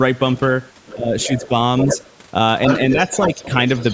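From 0.34 to 0.46 s a faint second voice, about 25 dB below the main speech, comes through. This is the other side's voice leaking through, likely because the loudspeaker signal was not fully removed by the echo canceller. It returns much louder, about 10 dB under the talker, from 0.86 to 2.1 s. Within that stretch, between 0.93 and 1.52 s, the speech is suppressed in double talk: the canceller likely treated both voices as echo and pulled the talker down by up to about 15 dB over roughly a third of a second in total, so words dip and lose their edges. Leakage resumes at about 10 dB below the speech from 2.65 s to the end, with a milder dip of about 5 dB between 3.28 and 3.4 s.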